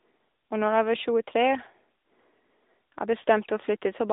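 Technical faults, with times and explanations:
Throughout: AMR narrowband mobile codec. The speech has been squeezed through the 2G/3G mobile codec, whose 8 kHz sampling leaves nothing above about 3.8 kHz, inside a line band of roughly 250 Hz to 3.7 kHz. The codec rebuilds the speech from a vocal-tract model driven by a few pulses per 5 ms subframe, so the speech sounds thin, boxy and plainly synthetic, with a buzzy edge. That degree of damage fits a mid-rate mode near 10.2 kbps.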